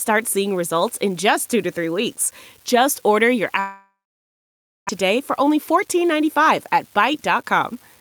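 Speech runs through this clip with a fine crackle that never stops, even in the pauses. That steady fizz is an unreliable data bit. One marginal data line flips its bit in random samples, and each error adds a spike of the same size. From 3.59 to 4.91 s the sound breaks off. The last sound carries on briefly as a fading buzz, then about 0.92 s of near silence follows. This is likely a long network dropout: roughly a second of audio never arrived, and playback resumes further on without it. From 5.03 to 7.72 s the speech sounds hurried but keeps its pitch. That is a jitter buffer speed-up. After the gap, the buffer held about 0.3 s more audio than it needed. The receiver cut many short pitch-period pieces, roughly 150 ms in total, so the audio plays about 5% fast.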